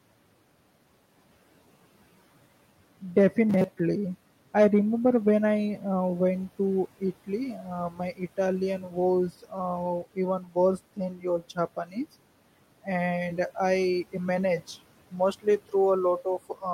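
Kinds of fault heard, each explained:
Robotic sound from repeated short buffers: From 3.50 to 3.80 s the speech becomes a rigid, metallic buzz locked at 188 Hz. This is likely caused by the playback side running short of new audio and looping a fragment of about 5.3 ms (one over 188 Hz) for most of that stretch, skipping the real signal. Unlike codec warble, the pitch stays fixed rather than wandering, while the words remain roughly traceable.
Speech cut by the noise suppressor: Five brief moments, at 7.90, 8.79, 10.40, 10.96 to 11.58 and 11.85 s, where soft parts of the speech are pulled down by about 8 to 12 dB, so syllables sound swallowed or faint. The suppressor mistook them for background. Unlike a dropout, the sound never vanishes into silence. It dips along with the room noise, which otherwise sits about 26 dB below the speech.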